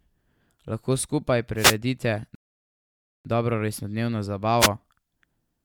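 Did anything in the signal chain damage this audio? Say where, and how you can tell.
Yes. The wireless microphone link, ahead of the converter, produced two wireless microphone noise hits: a burst of static from 1.56 to 1.76 s and a shorter swish from 4.59 to 4.69 s. Both are brief and then clear. The analogue FM radio path faded as reflected signals cancelled at the receiver, so receiver noise rose above the carrier for those fractions of a second.

Playback caused a rebuffering stall from 2.35 to 3.25 s. The speech cuts cleanly to silence and resumes exactly where it stopped, adding about 0.9 s to the clip without dropping any material. That clean pause-and-resume pattern identifies a starved player rather than a transmission fault: the downloaded audio ran out, and output halted until more data arrived over the network.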